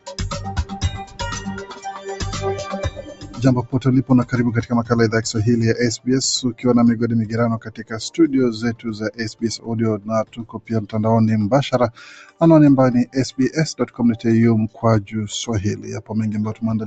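A speech-tuned noise suppressor was left running on this non-speech sound, treating sustained content as noise and swinging its level by roughly 15 dB, so it pumps and thins. Sound cut by the noise suppressor appears at 0.0–2.23, 2.62–3.4, 7.59–7.94, 8.75–9.69, 9.98–10.7, 12.25–12.41, 13.81–13.99 and 15.77–16.11 s, with held portions dropping by about 12 to 16 dB. The audio is band-limited to around 8 kHz by the call path.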